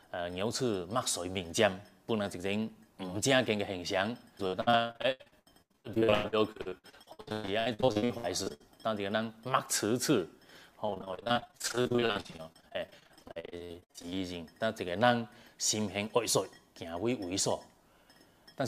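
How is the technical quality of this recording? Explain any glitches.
Two stretches of repeated packet loss (robotic sound) mar the recording, from 4.47 to 8.62 s and from 10.86 to 14.14 s. Dozens of short dropouts, up to 110 ms and 57 ms respectively, were each patched by extending the preceding sound, concealing over 40% of each span and leaving it choppy with pieces missing.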